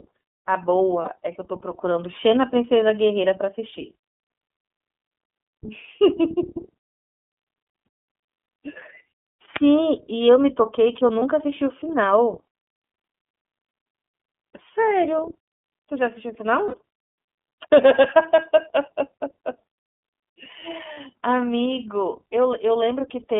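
The iLBC codec shapes the whole speech clip. The band runs only from 200 Hz to 3.4 kHz, and each frame's excitation is coded on its own, giving plainly audible roughness and a synthetic edge. The 30 ms framing fits the 13.33 kbps mode.

Lost iLBC frames occur at 1.02–1.09 s, 7.85 s, 11.18–11.23 s, 16.68–16.74 s and 20.94–20.97 s. At each, the decoder fills the gap by repeating the last pitch cycle with added noise, heard as a brief buzzy held vowel. Because frames stand alone, clarity returns immediately.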